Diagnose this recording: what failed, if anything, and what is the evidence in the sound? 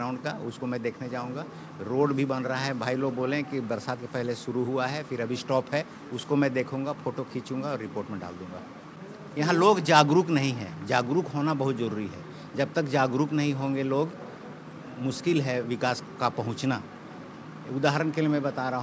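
Nothing failed: no stage from the analogue wiring to playback leaves any audible trace of a fault anywhere in the recording.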